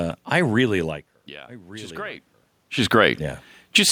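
Automatic gain rising appears from 0.79 to 2.31 s, just after "I really". The input dropped by about 18 dB as the talker moved away near 1 s. The gain control slowly added about 3 dB, so the voice and room noise swell together.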